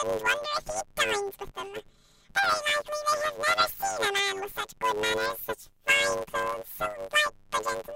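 From start to end, the speech carries a planar audio read as interleaved fault: each 10 ms block of left-then-right samples plays as two 5 ms double-speed halves. The result is a robotic 100 Hz buzz with no clear octave shift, seen as regular 10 ms striations and harmonic banding on a spectrogram.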